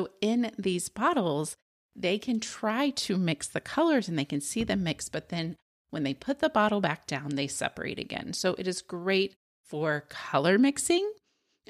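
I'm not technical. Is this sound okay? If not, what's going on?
Yes, nothing is wrong with this speech recording, and the quiet gaps between phrases are simply silence.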